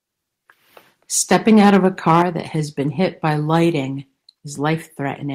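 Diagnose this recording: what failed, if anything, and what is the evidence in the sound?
The microphone's input gain was most likely set too high at the converter stage, producing microphone overload. From 1.31 to 2.22 s the speech peaks drive past full scale by about 6 dB, so their tops are flattened against the converter's limit, affecting a few percent of the samples. The squared-off waveform adds harsh, crackling distortion to the loudest syllables throughout that stretch.

The call processing then stepped the microphone volume down. At 2.22 s, right where the distorted stretch ends, the whole signal drops abruptly by about 5 dB. Speech and background fall together in a single step rather than a gradual fade, which points to the software having likely detected the clipping and lowered the device's input gain in one move instead of a compressor or a change in the talker's level.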